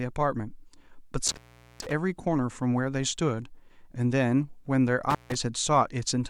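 At 1.27 s the speech drops out with a crackle, leaving only faint hiss for about 0.42 s before it snaps back by 1.92 s. A shorter dropout follows at 5.10 s, silent for about 0.15 s and recovered by 5.35 s. Both are intermittent contact: a loose plug or cable briefly breaks the signal path, so the crackles mark the connection opening and closing, with faint hiss filling the gap.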